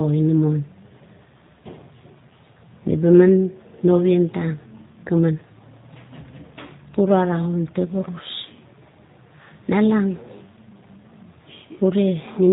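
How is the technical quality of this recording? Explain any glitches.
The technical quality is limited by a low-bitrate voice codec. Throughout, the speech shows G.729 codec damage: everything above 4 kHz is missing, and the voice sounds rough and synthetic, rebuilt from a filter and a few pulses in a way that fits 8 kbit/s.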